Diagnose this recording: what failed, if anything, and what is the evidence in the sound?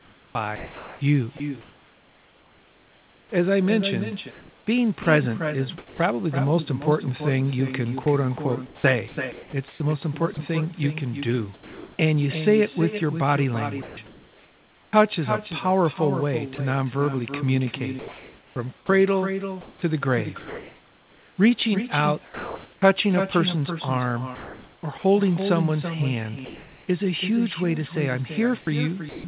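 Echo with no canceller, call-processing stage: the far end is playing the call on a loudspeaker, its microphone is picking that playback up, and no echo canceller removes it before it returns. Every phrase is trailed by a quieter, thinner copy about 9 dB down and roughly 300 ms late, for the whole of the speech. On a spectrogram each syllable has a weaker twin shifted right by about a third of a second. In the waveform, small ghost envelopes sit behind each burst.

Sound chopped by the voice detector, most likely at the sender's call processing: the detector keeps switching transmission on and off. This happens at 0 to 5.99 s, 8.03 to 11.99 s, 13.82 to 14.93 s, 17.99 to 22.82 s, 24.35 to 25.04 s and 28.61 to 29.24 s. Quiet syllables and word edges are swapped for comfort noise, for example about 3.1 s of the first stretch and 2.5 s of the 18 to 23 s stretch. On a spectrogram, harmonic speech stripes break off into flat, featureless noise patches.

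Sound dropped by the voice detector, again likely in the sender's call processing: at 16.55 to 16.58 s and 26.45 to 26.87 s, quiet speech is classed as background and not sent, and the receiver plays comfort noise instead. The second gap loses about 150 ms of speech. The first gap is a brief 20 ms clip of sound. In the waveform the envelope collapses to a low, even noise floor. On the spectrogram the speech stops dead under a uniform wash, which is confined below 4 kHz like the rest of the G.711 call.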